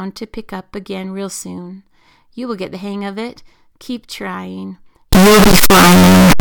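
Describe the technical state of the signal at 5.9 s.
At 5.9 s the speech shows a float read as integer fault, running from 5.13 s to the end at 6.40 s: 32-bit float samples likely interpreted as 32-bit integers, leaving a near-square, very loud, harsh waveform at an almost fixed, high level, with background noise as loud as the speech but pitch still audible.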